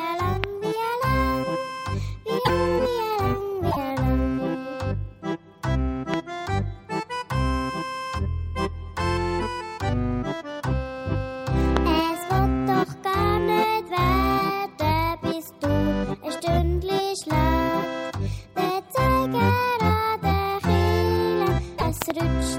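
A loud pop hits at 0.44 s, about 20 dB above the sound. It is a single sharp click, likely from a voltage step such as a plug or switch transient. The audio carries on underneath. From 2.44 to 2.50 s and 3.70 to 3.77 s, a broken MP3 bit reservoir shows up. Each time the audio jumps ahead with a brief garbled burst or gap. Missing frames likely left the next frame reading borrowed bits from the wrong data. Each burst lasts about two to three frames, which fits 26 ms MP3 frames. Another pop comes at 6.14 s, about 15 dB up. One more, about 20 dB up, comes at 11.77 s. The reservoir fault returns from 21.77 to 21.83 s. Between 22.02 and 22.12 s, two pops arrive in quick succession, again about 20 dB above the sound.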